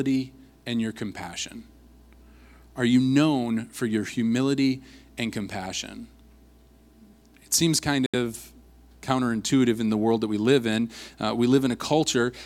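Speech clip, and there's one clear glitch: right after "seems kind", at about 8.06 s, the audio drops to dead silence for roughly 73 ms and then carries on, with the whole disruption over by 8.15 s. That stop-and-resume gap is a Bluetooth stall, likely caused by radio interference holding up packets long enough for the headphones' buffer to run empty, so playback simply paused until the resent data caught up.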